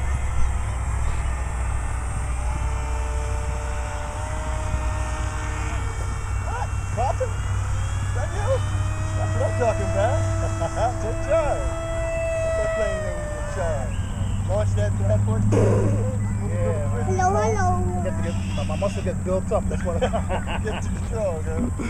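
A steady ticking about ten times a second, sitting roughly 30 dB below the audio, runs from 0.93 s to the end. This is Wi-Fi interference: a nearby radio's beacon, repeating every 102.4 ms, is being rectified by the audio circuitry and heard as clicks.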